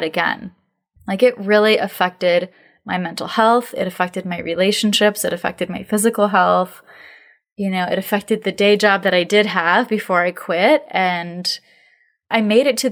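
No technical faults can be heard anywhere in the speech. There are no moments that need a timestamp or an explanation.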